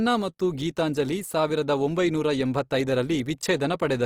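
Opus compression throughout: the speech sounds rough and grainy, likely from CELT-mode coding near 24 kbps filling starved bands with folded or noise content, though content extends to 20.2 kHz.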